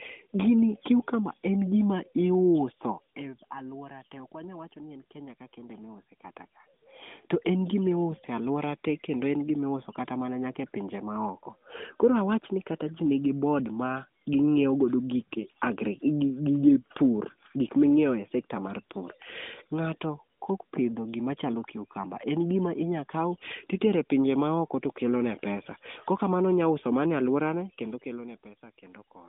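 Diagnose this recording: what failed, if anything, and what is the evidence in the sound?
Nothing failed in this recording; the sound gives no evidence of any fault.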